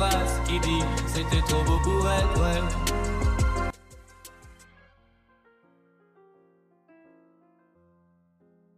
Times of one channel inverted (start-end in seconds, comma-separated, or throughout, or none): 3.70-8.78